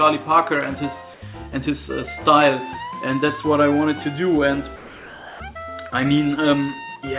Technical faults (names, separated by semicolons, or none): comfort noise in place of the background